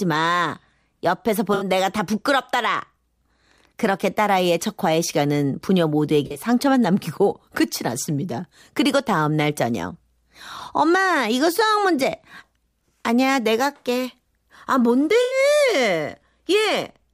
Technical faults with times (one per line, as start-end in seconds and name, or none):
1.54-1.65 corrupt frame concealed
6.26-6.41 corrupt frame concealed
15.21-15.37 corrupt frame concealed